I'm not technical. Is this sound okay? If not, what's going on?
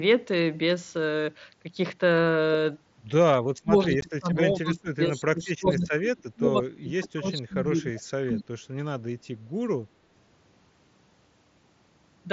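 No. From 3.43 to 4.38 s, 4.61 to 6.45 s, 6.64 to 7.6 s, 7.78 to 8.02 s and 8.32 to 8.43 s, the voice repeatedly sinks, nearly vanishing at first and only slightly dipping by the end. This is likely speech suppressed in double talk: the call's echo remover mistook overlapping talk for echo and turned the speaker down.

At 4.01 s, a tiny gap of about 15 ms appears with a sharp edge. That is unconcealed Bluetooth headset packet loss: a couple of small chunks of audio between headset and phone never arrived, and nothing filled the hole.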